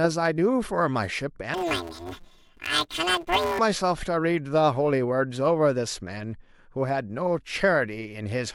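From 1.54 to 3.59 s the speech turns to a robotic buzz at about 172 Hz. This is planar audio read as interleaved. Each 256-sample block, about 5.8 ms, holds all its left samples before its right samples, yet it is read as alternating pairs. Because these blocks are so short, there's no octave jump, which sets it apart from long-block cases.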